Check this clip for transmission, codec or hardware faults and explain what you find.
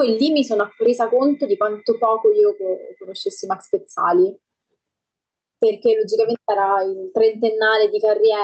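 One fault runs through the whole clip: gain pumping. The call codec's top end stops around 8 kHz, as a wideband call path normally does.

Across the full clip, the gain swings by around 10 dB. The likely cause is input gain set far too high, with a fast limiter clamping each peak and releasing in the gaps. The result sounds squashed and breathing. A noise gate would mute the pauses instead of raising them.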